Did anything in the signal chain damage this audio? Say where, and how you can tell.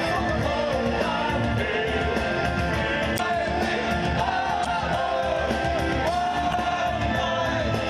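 Yes. The damage sits at the codec stage, as damaged data in a compressed stream. Three short disturbances land at 3.15 to 3.20 s, 4.62 to 4.67 s and 6.50 to 6.55 s, each lasting around 40 to 50 ms. At those points the decoder met corrupted bytes, could not parse the frames, lost sync and hunted for the next valid frame header. Each one comes through as a brief chirp or blip where the audio briefly breaks off before resuming.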